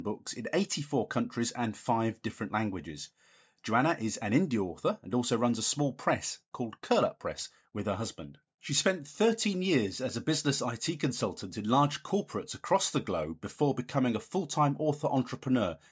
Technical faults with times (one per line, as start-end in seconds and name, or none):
none